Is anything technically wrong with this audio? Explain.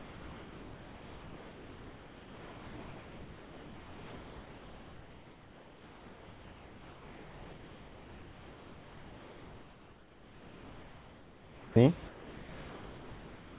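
Yes. From 0 to 11.76 s the speech gives way to steady, featureless noise. A brief stretch returns, then from 12.08 to 13.57 s it drops to noise again until the end. This is most likely sound dropped by the voice detector. The sender judged the speech to be background and stopped sending, and the receiver filled the gaps with comfort noise. Through the call path, with nothing above 4 kHz, the fill sounds flat and hiss-like.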